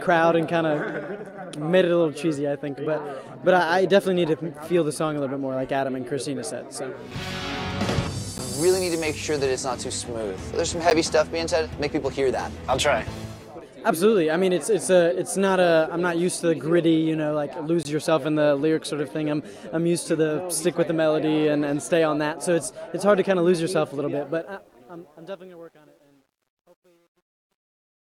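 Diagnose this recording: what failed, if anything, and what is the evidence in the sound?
The driver or buffer stage failed to deliver samples in time, so blocks of digital silence replaced the audio: 10 ms at 8.38 s and 10.9 s, and 20 ms from 17.83 to 17.85 s. The two 10 ms gaps are short enough to come across as ticks or dips rather than silence.

A gain stage in the sample-format conversion kept too few bits, with no dither, during the fade-out that starts around 24 s. From 24.13 s the tail turns gritty, and from 25.19 s it is at its worst, which fits truncation distortion at roughly 10-bit resolution.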